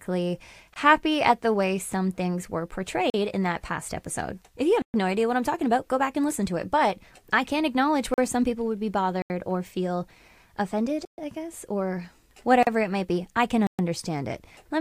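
The output path likely failed to fill its buffer in time, and each missing block went out as zeros. The speech cuts straight to digital silence and back. These blocks of digital silence fall at 0.74 s, 3.10–3.14 s, 4.82–4.94 s, 8.14–8.18 s, 9.22–9.30 s after "some people would be", 11.05–11.18 s, 12.63–12.67 s and 13.67–13.79 s.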